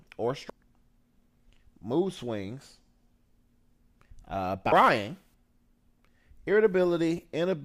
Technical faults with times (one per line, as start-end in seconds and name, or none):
0.49 damaged data in a compressed stream
4.72 damaged data in a compressed stream
7.17 damaged data in a compressed stream